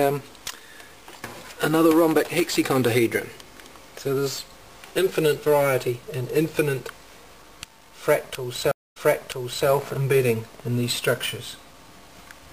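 At 8.71 s the connection drops, producing a stream reconnect: the player falls silent, reconnects and restarts its decoder mid-stream. After about 240 ms of silence, ending by 9.69 s, the audio resumes 0.73 s earlier, so a stretch already heard repeats.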